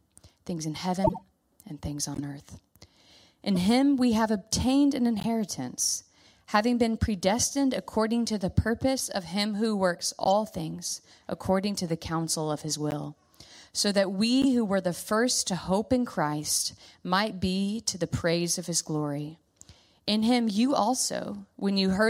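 Corrupt frame decoded, seven times: 1.04 to 1.22 s, 2.14 to 2.20 s, 3.55 to 3.57 s, 5.18 to 5.25 s, 10.24 to 10.32 s, 12.91 to 12.94 s and 14.42 to 14.45 s. Damaged compressed frames were decoded anyway, and their misread gains and codes put energy at the wrong frequencies. Each event is a squeaky blip or noisy burst lasting a few frames. The first event is the longest, at several frames. The loudest peaks reach about -10 dBFS, and the rest reach about -20 dBFS.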